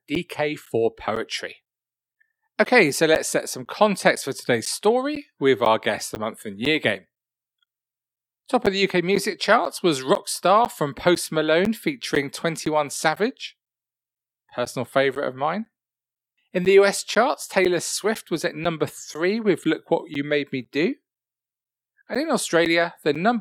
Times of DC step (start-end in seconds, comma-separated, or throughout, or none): none